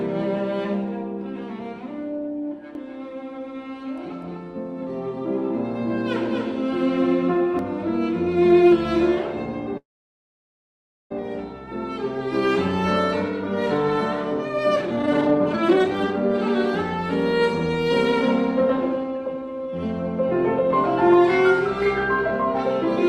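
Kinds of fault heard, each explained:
Doubled audio track: a full-band copy about 5 dB quieter trails roughly 300 ms behind from 2.75 to 7.59 s, likely a second capture path, showing as repeated waveform shapes offset in time.
Call audio freeze: at 9.77 s the sound is briefly continued, then silent for 1.28 s until 11.12 s, likely held-up packets; a blank spectrogram band, with nothing lost afterwards.
Jitter buffer speed-up: pitch-period trimming shortens the audio, at 182% speed from 14.76 to 16.24 s and 106% from 17.89 to 19.67 s; harmonics keep their height while events crowd closer.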